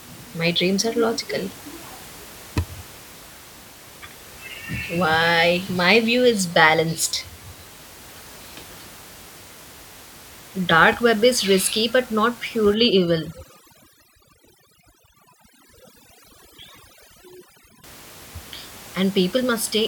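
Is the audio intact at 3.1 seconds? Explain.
Yes, the audio is intact at 3.1 s; the speech carries on cleanly, with only the room's background noise about 22 dB below it.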